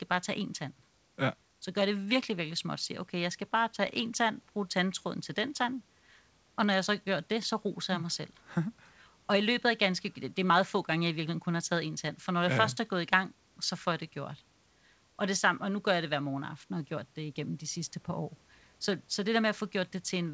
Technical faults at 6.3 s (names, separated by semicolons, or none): none